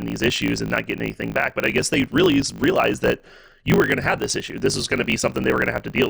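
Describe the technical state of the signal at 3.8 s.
At 3.8 s, as across the whole clip, the speech suffers a block size mismatch (truncated): each written block, which fits 1024 samples, loses its tail before the next stage reads it. That leaves a 50 Hz buzz and speech running 1.16 times fast at near-normal pitch, unlike a sample-rate error, which would shift pitch too.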